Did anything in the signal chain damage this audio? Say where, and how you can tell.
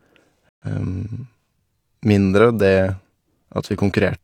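Yes. A corrupt frame was muted from 0.50 to 0.67 s: the decoder rejected damaged compressed frames and the player substituted silence, leaving an abrupt hole of about 0.17 s, which fits several consecutive codec frames. The speech resumes on time, so timing was preserved.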